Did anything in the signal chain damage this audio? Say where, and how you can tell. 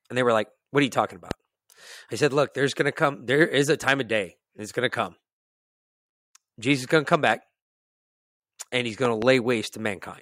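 Yes. A loud pop at 1.31–1.33 s after "what are you talking", then a double pop at 9.05–9.24 s after "and he's". Both sit roughly 15 dB over the continuing speech, likely from voltage transients in the analogue wiring.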